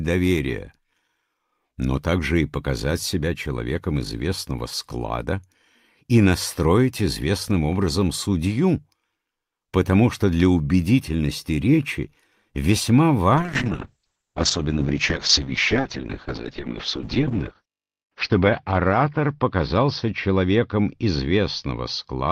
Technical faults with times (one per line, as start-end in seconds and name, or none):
13.37-22.32 call bitrate drop